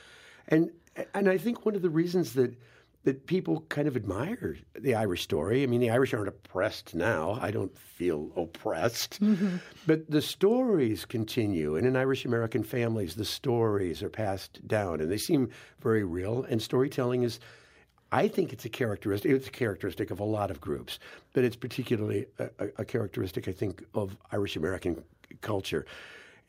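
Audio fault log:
No fault is heard in this speech clip.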